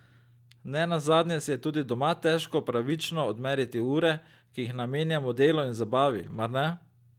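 At around 6.09 s, right after "jih namenjamo delu in", there's a lost packet rebuilt from error correction, running to about 6.39 s. Packets went missing, but the ones after them carried low-bitrate backup copies, so the decoder played those instead of leaving a hole. You don't hear a dropout, just a stretch that turns rough and noisy. The roughness fits roughly 160 ms of rebuilt audio, likely eight packets' worth.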